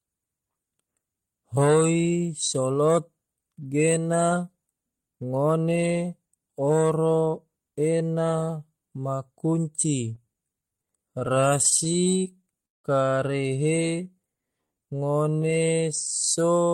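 Just after "ma kunci", from 10.15 to 12.86 s, the speech breaks into repeated stalls (stutter). Audio kept reaching the receiver late, so its jitter buffer drained again and again, some thirty times, and each hole was bridged by extending the last sound, the longest by 182 ms. About half a second of filler ends up covering 18% of the span. Nothing is dropped, which sets this apart from packet loss: the speech drags and hiccups rather than skipping.

From 13.96 to 15.60 s comes a jitter buffer slow-down. Here the receiver was rebuilding its reserve, repeating single pitch periods and slivers of pause many times over, which adds 253 ms and runs the passage at 85% speed. Unlike the stutter, the stretching is smooth and continuous, without stop-start breaks. Unlike a slowed tape, the pitch stays put, leaving drawn-out sounds.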